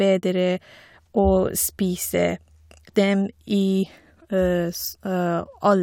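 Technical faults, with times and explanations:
0.11–5.82 s, clock slip clicks: faint regular ticks about every 0.1 s through the speech, likely from two unsynchronised clocks about 200 ppm apart, each slip dropping or repeating one sample.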